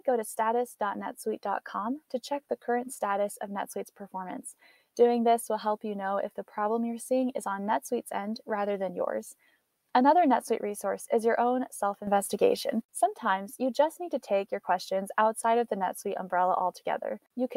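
At 12.07 s the audio and its background noise jump up together by about 8 dB, then drop back at 12.82 s. This sudden gain jump likely comes from a gain setting applied without a ramp.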